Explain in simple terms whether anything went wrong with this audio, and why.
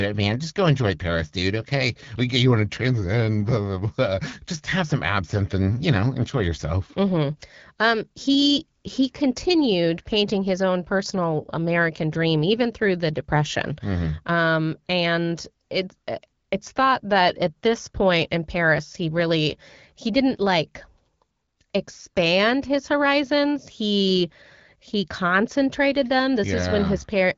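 Nothing went wrong: the speech comes over an HD Voice (AMR wideband) phone link working as designed, and that link is why no sound reaches above about 7.2 kHz.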